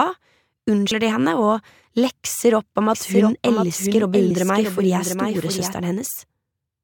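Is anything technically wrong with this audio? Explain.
Yes. From 2.94 to 5.74 s there is a doubled audio track: a full-band copy, about 5 dB quieter, trails roughly 0.7 s behind, likely from a second capture path. It starts and stops abruptly, showing as a quieter, shifted duplicate of every spectrogram pattern and waveform burst.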